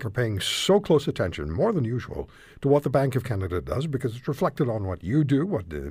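No technical faults can be heard anywhere in this speech recording.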